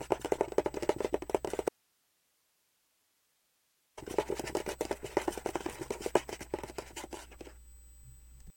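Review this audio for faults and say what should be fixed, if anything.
USB whine runs through the whole clip as a steady 8 kHz tone, about 30 dB below the sound. That pitch matches the 125-microsecond microframe rate of the USB bus. Its current draw leaks in through power or ground. To prevent it, power the interface from a clean supply or use an isolated USB link.

An audio dropout to a faint residue starts at 1.69 s. The sound cuts out abruptly and returns at 3.98 s, about 2.3 s later. The gap holds only hiss, roughly 40 dB down. The signal was likely lost upstream while the later path stayed live. To prevent it, secure the source connection and cabling before recording.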